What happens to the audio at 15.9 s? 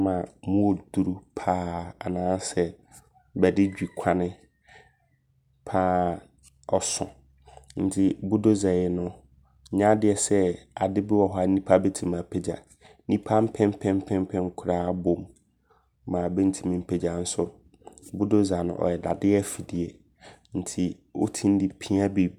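Nothing goes wrong at 15.9 s: the speech runs through that moment intact, with no fault to be heard.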